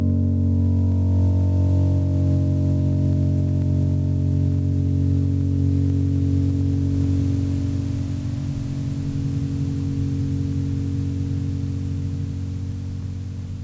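The music here was captured with the input gain likely set far too high, so a fast limiter or compressor in the chain clamps down on every loud moment and releases in between. That is gain pumping, and it runs through the whole clip, with the level swinging by around 10 dB. Loud and quiet parts sit unnaturally close together, giving a squashed, breathing quality. The call microphone processing the audio passed through trims the deepest bass and leaves nothing above 8 kHz.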